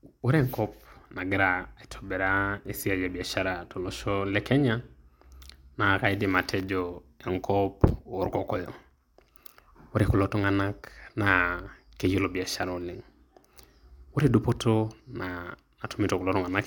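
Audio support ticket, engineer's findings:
Chunks out of order, 7.88 to 7.90 s, right after "naa kaidim atejo enkop". Brief jumbled blip. One 10 ms block played one slot late, after the block that should follow it. No audio lost, but the sequence is swapped, leaving three hard joins, each a waveform discontinuity. Probable component: buffer or jitter queue reordering on write or playout.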